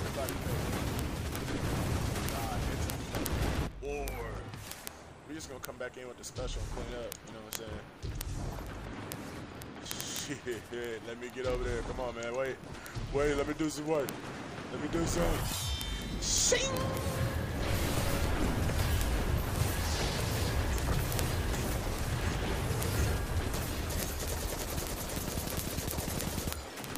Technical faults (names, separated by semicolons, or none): word clock ticks